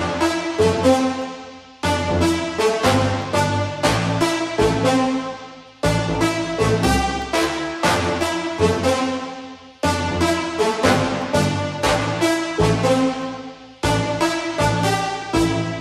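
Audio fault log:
Throughout: channel delay (comb filtering). One channel arrives roughly 10 ms behind the other, and when the pair is folded to mono, the content they share cancels at a series of evenly spaced frequencies, the lowest near 40 Hz. Those fixed notches carve the spectrum into a regular comb, so the sound comes across hollow and phasey, with a thinned body that stays the same for the whole clip.
0.22 to 15.22 s: periodic USB or driver dropouts. Something stalls the USB bus or audio driver once every second, and each stall loses about half a millisecond of audio, filled with silence. Roughly fifteen of these gaps fall at one-second intervals from 0.22 s through 15.22 s. Each abrupt cut to silence and back produces a tick, so the audio carries a steady, metronome-like clicking wherever there is signal.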